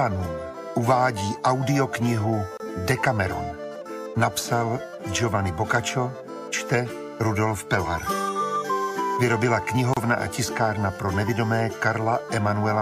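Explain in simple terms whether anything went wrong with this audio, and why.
Yes, two short dropouts: a gap at a join of encoded pieces at 2.57 s (about 27 ms) and again at 9.94 s (about 31 ms). The audio was encoded in chunks and glued back together untrimmed, so each encoder's padding silence shows up before the sound carries on.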